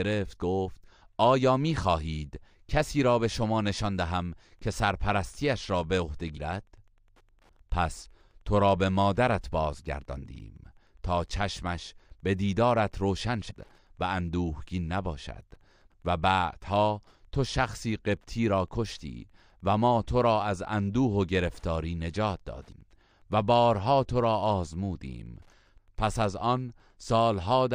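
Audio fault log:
3.48 s to end: Wi-Fi interference. A faint, steady ticking, roughly 45 dB below the speech, repeats about ten times a second. A nearby Wi-Fi radio's beacon, sent every 102.4 ms, is being picked up and rectified by the audio circuit, turning each radio pulse into an audible click.
6.36–6.39 s, 13.49–13.52 s, 22.71 s: damaged data in a compressed stream. Each is a brief chirp or blip lasting a few hundredths of a second. Corrupted bytes in the compressed stream made the decoder misread those frames and lose sync until it found the next valid frame header.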